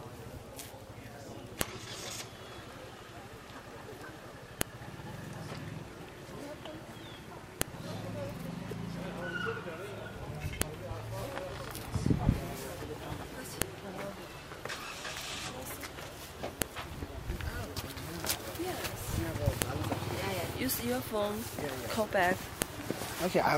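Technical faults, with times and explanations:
1.61, 4.61, 7.62, 10.62, 13.62, 16.62, 19.62 and 22.62 s, file header played as audio: sharp, loud clicks every 3 s, regardless of the signal, as each joined piece's leftover WAV header bytes are reproduced as a brief burst of arbitrary sample values.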